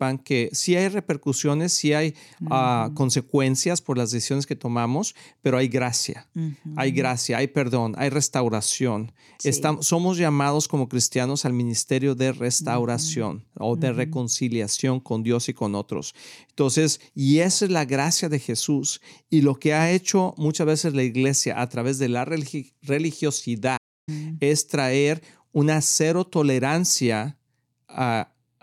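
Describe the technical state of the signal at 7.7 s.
At 7.7 s the speech signal is intact, with no audible fault at that point.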